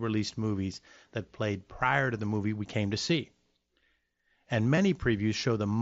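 At 3.09 s, just after "movie we came to", concealed Bluetooth headset packet loss covers a 7.5 ms gap, which fits a single lost packet. At 4.76 s a 15 ms gap, consistent with two consecutive lost packets, is patched the same way. The receiver bridged each hole by repeating a matching stretch of recent waveform. Unlike a true dropout, which leaves a silent notch or click, the first is nearly hidden in the mSBC wideband audio, while the two-packet run at the second patch comes through as a short buzzy tone with a small warble where real audio returns.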